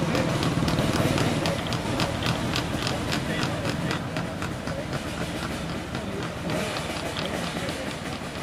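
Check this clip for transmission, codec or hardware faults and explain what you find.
One fault is present: a doubled audio track from 1.86 to 3.98 s. A second full-band copy trails the original by about half a second at roughly 5 dB lower, with no decay or room colour, starting and stopping abruptly. Likely cause: a slower second capture path.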